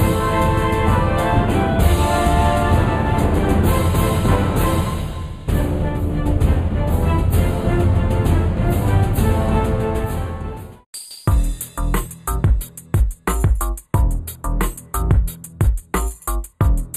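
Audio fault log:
Throughout, channel delay (comb filtering): one side of the original pair seems to arrive about a tenth of a millisecond late, which fits a delay of around four samples, and folding the two into mono cancels their shared content at evenly spaced frequencies. The first notch sits near 5 kHz, with the next up around 15 kHz, so the top end takes on a fixed hollow, phasey colour that stays put for the whole clip.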